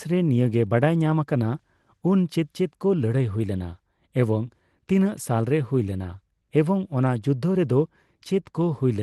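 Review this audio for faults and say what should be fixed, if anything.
Nothing to fix: no faults in this speech, and the call-path coding sounds as expected, with the top end stopping near 12 kHz, which fits Opus at about 20 kbps.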